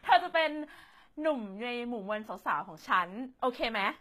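From start to finish the speech carries plainly audible damage of the kind HE-AAC compression leaves, likely at a very low rate, something near 20 kbps. The treble is present but synthetic: upper bands are copied up from lower ones and shaped only coarsely, so s sounds come out gritty, metallic and lisping. A plain low-bitrate codec that simply discards the top would sound dull instead; here the highs survive but ring false.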